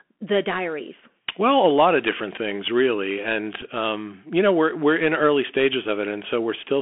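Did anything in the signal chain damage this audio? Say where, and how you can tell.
Yes. At the codec stage, the Bluetooth CVSD headset codec squeezed the whole clip through a narrowband link, which fits 64 kbps CVSD. The speech stays between 250 Hz and 3.4 kHz, s sounds turn scratchy, loud bright sounds distort, and a granular hiss sits underneath.

On the wireless link, a Bluetooth headset packet was repeated at 3.62 s. Lost voice data was replaced by re-decoding the previous packet's bits for about 7.5 ms, which fits two lost packets. The result is a brief buzzy tick rather than a sustained tone.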